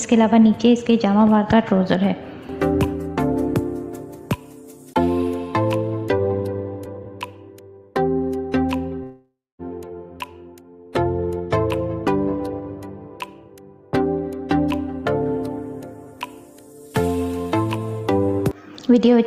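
From 9.03 to 9.62 s, sound decays into a fading buzz, then silence, and resumes with material lost. This is likely a long network dropout, not brief packet loss.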